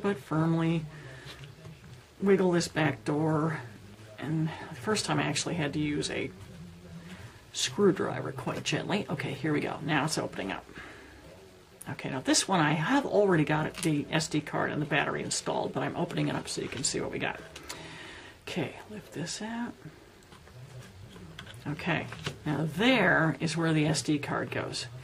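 No dropouts, clipping, distortion, timing glitches or level jumps are audible anywhere in the audio.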